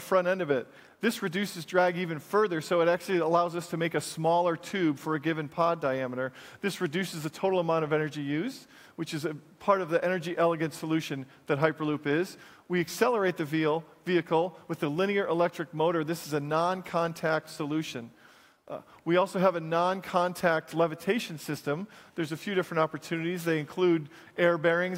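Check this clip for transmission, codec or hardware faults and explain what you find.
Nothing in this clip points to a fault anywhere along the chain. There is nothing to report or explain.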